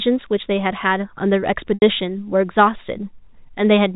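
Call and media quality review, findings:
Packet loss with pitch repetition, 1.74 to 1.82 s: 80 ms gap, consistent with four 20 ms packets lost. Concealment repeats the last pitch period, fades out over about 50 ms, brief silence, then cross-fades back. Probable component: network jitter buffer. G.711 telephone band intact.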